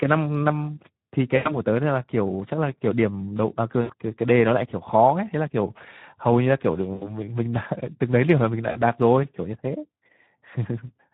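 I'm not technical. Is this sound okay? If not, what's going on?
No, the speech has two kinds of fault.

The first runs through the whole clip. It has been through the Speex codec, an older compression scheme from internet calls and game chat. Here it runs at a fairly low quality setting, so it has too little data to rebuild the voice faithfully. The damage is plainly audible: the voice sounds rough, hoarse and somewhat noisy.

The second is VoIP packet loss concealed by the speech codec. It happens four times: at 1.35 to 1.52 s, 3.81 to 3.94 s, 6.93 to 7.11 s, and 8.71 to 8.81 s. Each time, pieces of the call went missing in transit. The gaps fit roughly a tenth of a second of lost audio in the first case and less in the others. The decoder filled each gap by stretching the last sound it had into a buzzy tone or a coloured noise that fades. It takes a moment after each gap to return to normal.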